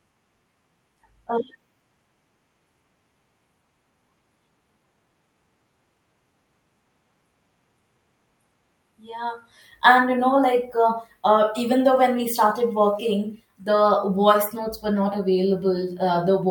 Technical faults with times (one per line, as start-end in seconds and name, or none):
none